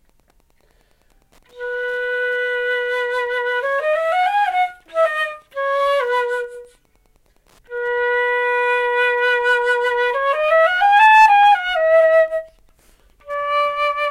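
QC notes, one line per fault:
Throughout: Wi-Fi interference. A steady faint ticking repeats every 102.4 ms, about ten times a second, roughly 45 dB below the sound. A nearby Wi-Fi radio's beacon bursts are being rectified by the audio circuitry and demodulated into audible clicks.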